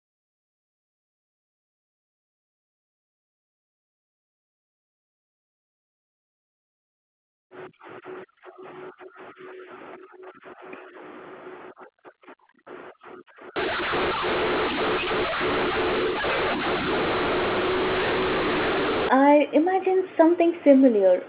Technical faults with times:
13.56-19.09 mu-law and A-law mixed up

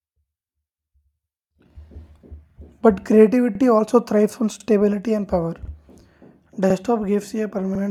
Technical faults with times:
2.50-2.55 overlapping chunks
3.55-3.60 overlapping chunks
4.60-4.65 overlapping chunks
5.65-5.70 overlapping chunks
6.70-6.75 overlapping chunks
7.75-7.80 overlapping chunks

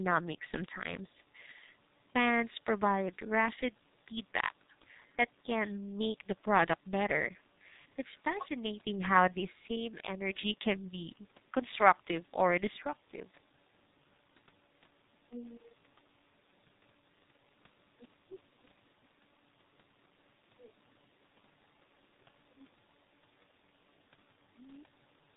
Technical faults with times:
0.00-25.36 G.723.1 codec

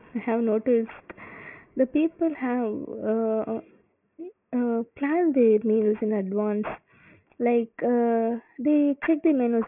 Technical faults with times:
0.00-9.68 aliasing

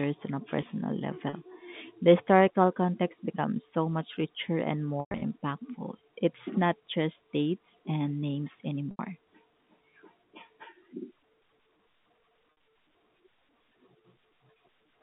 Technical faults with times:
1.29-1.33 packet loss with pitch repetition
5.00-5.22 packet loss with pitch repetition
8.91-8.99 packet loss with pitch repetition
12.50-12.60 packet loss with pitch repetition

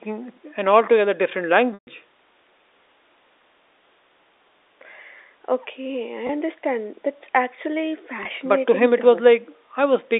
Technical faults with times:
1.74-1.87 packet loss with pitch repetition
6.27-6.29 packet loss with pitch repetition
8.23-8.25 packet loss with pitch repetition

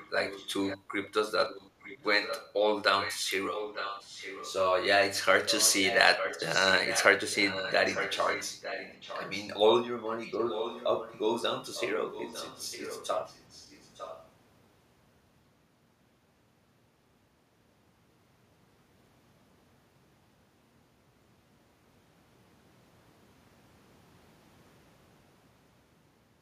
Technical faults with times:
0.00-1.08 echo leak
1.48-2.54 echo leak
3.00-4.53 echo leak
5.47-9.48 echo leak
10.06-14.29 echo leak

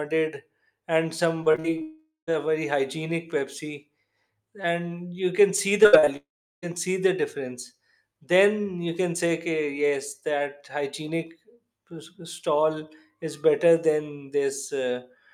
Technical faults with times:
1.43-1.82 repeated packet loss (robotic sound)
1.82-2.29 long network dropout
5.83-6.09 repeated packet loss (robotic sound)
6.17-6.64 long network dropout

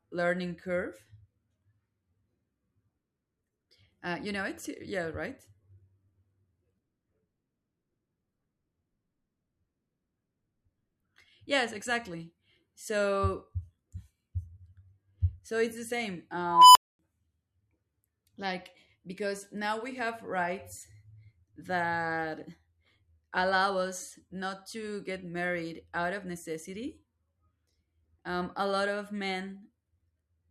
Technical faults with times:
16.46-16.99 unstable filter

